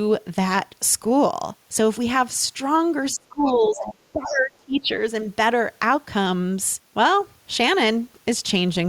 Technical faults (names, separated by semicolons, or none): speech suppressed in double talk; other side's voice leaking through